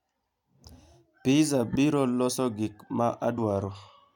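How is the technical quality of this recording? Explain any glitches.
The speech recording has two decoding glitches.

At 1.72 to 1.76 s, a corrupt frame was decoded: damaged bits in roughly two frames put energy at wrong frequencies, heard as a brief glitch peaking around -20 dBFS.

At 3.37 s, compressed frames were skipped, so the audio jumps ahead by about 50 ms. The join is heard as a brief discontinuity where the audio jumps.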